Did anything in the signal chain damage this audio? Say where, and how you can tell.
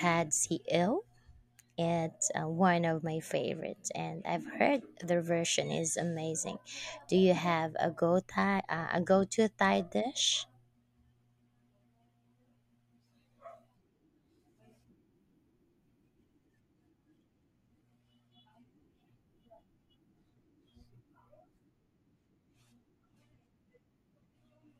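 No, no signal chain damage.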